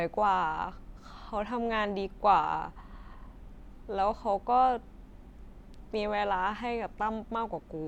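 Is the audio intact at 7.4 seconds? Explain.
Yes, the speech at 7.4 seconds is intact, with no dropout, click, distortion or other fault to be heard at that moment.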